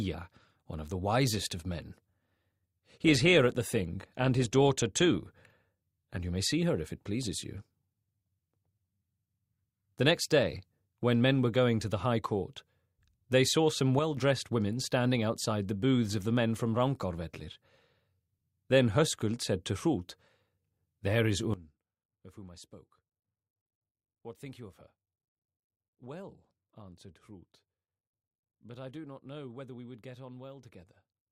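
An adaptive stream at a lower bitrate runs from 2.24 to 6.24 s. Codec artefacts rise abruptly, with no gap, which fits a switch from about 64 to 32 kbit/s Opus. A sudden gain jump at 13.99 s drops sound and background together by about 6 dB until 14.17 s, and another at 21.54 s drops them about 17 dB through the end, likely from digital gain changed without a ramp.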